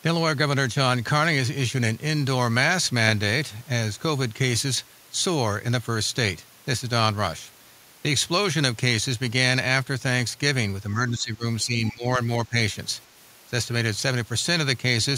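Speech suppressed in double talk appears three times, from 10.94 to 11.44 s, from 11.64 to 12.06 s and from 12.47 to 12.56 s. The speech sinks abruptly, by roughly 15 dB, then about 20 dB, then about 10 dB, in short chopped stretches that together come to under a second. This is likely the echo canceller meeting simultaneous speech from both ends and, unable to tell the local talker from loudspeaker echo, attenuating everything.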